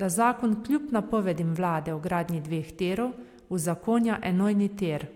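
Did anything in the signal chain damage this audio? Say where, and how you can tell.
No, nothing in the chain seems to have damaged this speech recording; I can't hear any stage leaving a mark on it, so there's nothing to point to.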